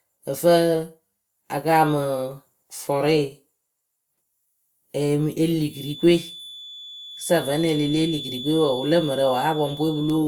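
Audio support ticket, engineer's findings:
Feedback whistle from 5.65 s, after "ee mɨ e li", to end of clip. Thin steady 3.5 kHz tone, well below speech, swelling and fading slowly. Likely speaker-to-mic loop held just at the feedback point.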